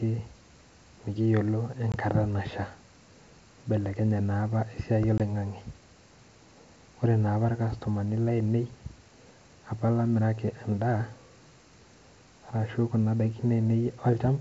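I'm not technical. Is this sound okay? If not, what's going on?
No. This is packet loss on an ADPCM call: a single packet went missing at 1.92 s and 5.18 s, leaving brief gaps, then slightly distorted speech as the decoder resyncs.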